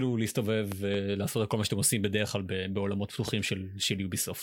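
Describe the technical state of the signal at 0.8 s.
At 0.8 s the speech is hit by a loud pop spanning 0.72 to 0.97 s: two sharp pops, about 15 dB above the speech, which continues underneath. The likely cause is a sudden voltage step or pulse from a plug, switch, static discharge or driver glitch, added to the signal.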